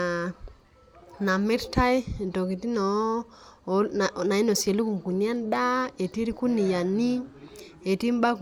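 No technical faults are audible.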